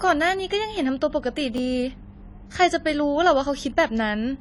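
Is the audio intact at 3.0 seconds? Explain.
No. At 3.0 seconds, as throughout, the speech is dull and smeared, with fizzy, warbling sibilants and nothing above 11.5 kHz. The likely cause is AAC compression at a rate fitting about 32 kbps, which quantises the spectrum coarsely and cuts the top band.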